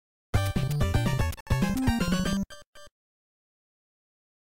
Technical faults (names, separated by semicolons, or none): Bluetooth stall